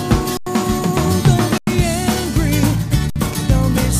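Underrun with held sample at 0.37, 1.58 and 3.10 s: the buffer ran dry, output froze flat on its last value, then resumed over skipped audio.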